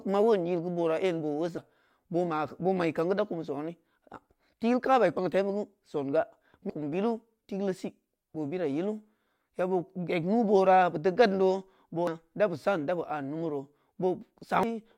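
Damaged data in the compressed stream at 1.58, 6.70 (before "billu tikul"), 12.07 (before "da bu") and 14.63 s: the decoder misreads corrupted frames and resyncs, producing brief glitches in the speech.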